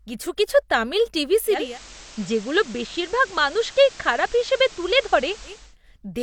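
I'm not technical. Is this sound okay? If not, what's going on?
No. Just after "কিছু কিছু তামিল টিভি", from 1.46 to 5.77 s, the radio does digital radio blending to analogue: it fades over about a third of a second to the FM version, which sounds hissy, then fades back. The loudness stays the same.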